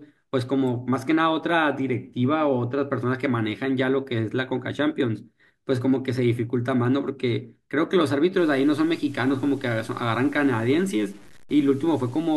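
From 8.38 s to the end at 12.36 s, the speech turns grainy, with a rough fizz riding on it. That's likely low bit depth without dither, which fits truncation to about 7 bits, leaving error only around 30 dB down.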